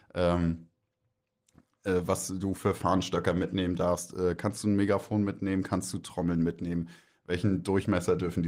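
No technical faults can be heard in the speech here. The Opus voice compression runs in its hybrid mode at 24 kbps and keeps the full bandwidth, leaving only light coding damage.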